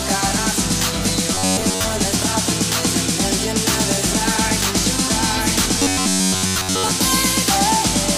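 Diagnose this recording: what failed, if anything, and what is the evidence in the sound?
Robotic sound from repeated short buffers at 1.35–1.84 s and 5.79–6.92 s: a rigid 93.8 Hz buzz, likely from the driver or buffer stage looping about 10.7 ms chunks. Unlike dropouts, nothing goes silent.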